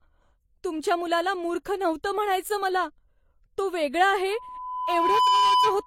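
Throughout the speech, nothing is present above 16.2 kHz, and the coding artefacts of two different lossy codecs are heard together. This is likely transcoding between lossy codecs, and the texture fits an MP3 at around 56 kbit/s re-encoded as HE-AAC at around 32 kbit/s.

At 4.30 s, just after "तो वेगळा", loudspeaker feedback squeal begins and continues to the end. A microphone is picking up its own loudspeaker, and the loop gain exceeds one at 1 kHz. That 1 kHz tone swells over roughly a second and settles a few decibels above the speech.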